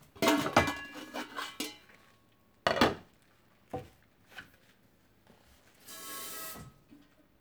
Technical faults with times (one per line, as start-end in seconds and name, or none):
none